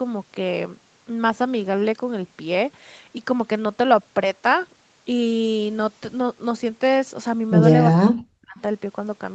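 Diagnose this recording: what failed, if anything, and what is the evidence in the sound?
The failure sits in call processing, and it's most likely speech suppressed in double talk. From 7.93 to 8.6 s the speech is turned down, about 40 dB down at its deepest, with roughly half a second lost in total. That pattern points to the echo canceller failing to separate the near-end talker from loudspeaker echo while both sides spoke, then turning everything down. The 8 kHz ceiling is just the Opus call path's bandwidth.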